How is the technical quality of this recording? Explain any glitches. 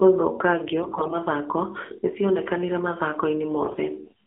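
The technical quality is poor: the speech has the thin, buzzy sound of a mobile call, with two short bursts of harsh corruption.

Throughout, the voice is confined to roughly 250 Hz to 3.4 kHz and has a clearly synthetic, buzzy edge. This is the AMR narrowband mobile codec. It samples at 8 kHz and rebuilds speech from a vocal-tract model excited by a few pulses per subframe, so nothing above 4 kHz survives. The plainly audible coarseness suggests a low mode, likely around 7.4 kbps.

From 0.80 to 1.15 s, and again from 3.62 to 3.79 s, the voice turns hoarse, scratchy and gargly while keeping roughly its pitch and loudness. These are AMR bit errors. On a weak link, the lightly protected bits in each frame arrived flipped, but the checksum on the critical bits still passed, so the decoder used them. The excitation pulses landed in wrong positions and the finer gain and spectral values were off. 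The second burst is the rougher of the two, consistent with an error rate of about one bit in ten against about one in fourteen in the first.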